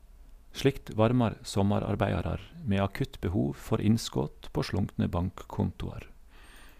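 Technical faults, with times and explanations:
No technical faults can be heard in the recording; the speech signal stays continuous and intact for its whole length.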